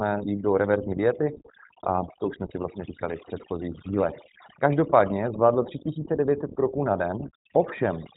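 Speech runs the whole 8.2 seconds through overdone noise removal: the background drops and breaks up into small twinkling specks, and quieter parts of the voice get pulled down with the noise. Unlike a plain gate, the damage flickers band by band rather than switching the whole signal. The iLBC codec is also plainly audible throughout. Nothing passes above 3.8 kHz, and the speech stays intelligible but slightly rough and synthetic. The coding roughness, which fits iLBC's 15.2 kbps mode with 20 ms frames, is steady grain rather than the shimmering specks of the noise removal.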